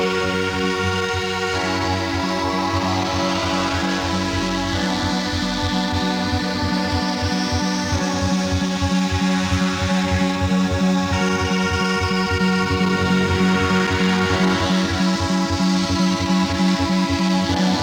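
No technical fault can be heard anywhere in this audio. There is nothing to mark on the timeline and no cause to trace.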